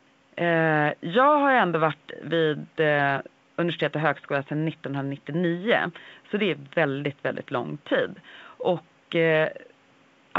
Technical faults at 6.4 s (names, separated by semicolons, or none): none